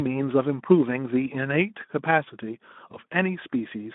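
At 2.91 s the speech smears into a brief buzzy tone or coloured noise that fades, still distorted until 2.97 s. It is VoIP packet loss concealed by the speech codec: 20 ms went missing, fitting one lost frame, so the Speex decoder extrapolated its last pitch and filter at falling gain.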